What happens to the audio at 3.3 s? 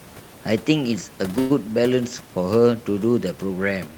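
Nothing goes wrong at 3.3 s: the speech carries on intact, with only the room's own background noise sitting about 20 dB beneath it as a natural part of the recording.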